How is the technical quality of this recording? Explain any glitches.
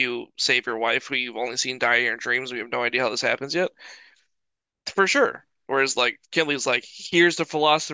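The technical quality of this recording is sound, with no glitches to explain.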